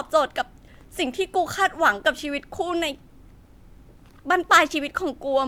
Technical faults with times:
none

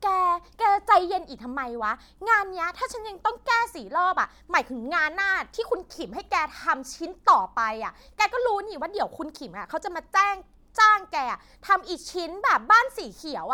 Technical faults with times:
0.00-13.54 generation loss

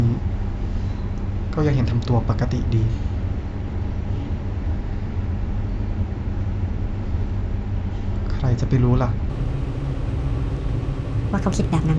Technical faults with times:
9.30-11.99 wrong sample rate

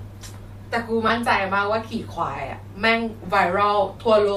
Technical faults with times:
1.08-1.10 lost LE Audio frames
3.98-4.00 lost LE Audio frames

